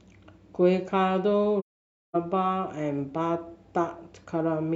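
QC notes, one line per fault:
1.60–2.16 s: AAC frame loss with muting. Speech drops to silence for about 0.55 s, fitting a run of lost frames the decoder zeroed, with window overlap giving soft fade edges.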